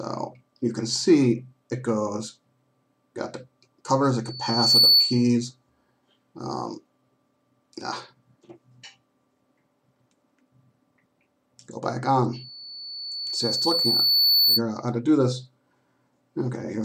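A piercing 4.5 kHz tone swells quickly from 4.24 to 5.31 s and more slowly from 12.33 to 14.62 s, rising well above the sound. This is loudspeaker feedback squeal, a microphone–speaker loop whose gain exceeds one at that frequency.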